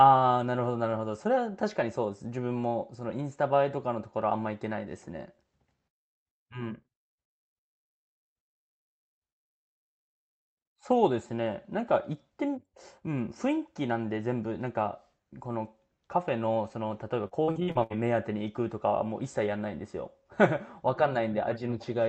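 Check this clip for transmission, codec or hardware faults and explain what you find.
One transmission fault. From 17.27 to 17.93 s, repeated packet loss (robotic sound): gaps up to 71 ms were patched by extending prior sound, giving choppy speech with pieces missing, with smeared, repeated spectrogram frames and broken waveform envelopes. The call-codec path, which fits Opus, shows its band limit near 8 kHz.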